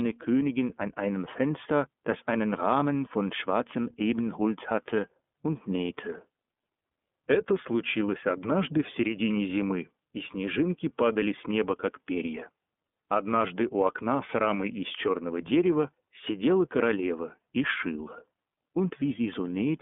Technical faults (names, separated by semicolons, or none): iLBC codec